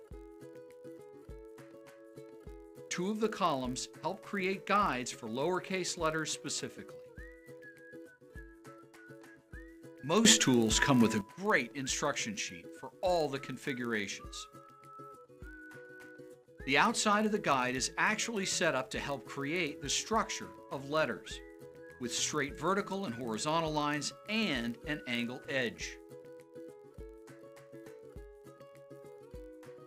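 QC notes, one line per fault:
Throughout: block size mismatch (padded). Zero-filled gaps in each block, consistent with 1024-sample reads, produce a 46.9 Hz buzz; playback runs marginally slow, timbre unchanged.
10.25–11.21 s: sudden gain jump. Sound and background noise rise together by about 12 dB, then drop back, likely from a digital gain change without ramping.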